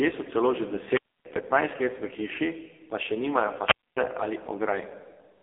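From the start, the speech has been through the AMR narrowband mobile codec, heard as a thin, buzzy, synthetic voice. Its heavy coding damage fits one of the lowest AMR-NB modes, around 5 kbps, where a few pulses per subframe drive a vocal-tract model. The energy sits in a telephone band of 300 Hz to 3.4 kHz. On a spectrogram, everything above 3.5 kHz is an empty band, and harmonics look smeared and blocky.

From 0.87 to 1.27 s there is a wireless microphone squelch dropout. The radio link fades, hiss swells, and the receiver mutes the output for about 277 ms before the speech returns. The waveform shows a short noisy flare, then a near-flat gap. A second dropout runs from 3.61 to 3.98 s, with a mute of about 253 ms, and shows the same hiss, hole and recovery, seen on a spectrogram as a broadband smear followed by a blank column.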